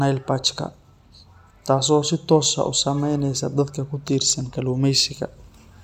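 From 0.12 s to 5.81 s, faint clock slip clicks tick steadily about ten times a second, likely from two unsynchronised clocks differing by roughly 200 ppm, each slip a single sample. Their even spacing distinguishes them from random crackle or dropouts.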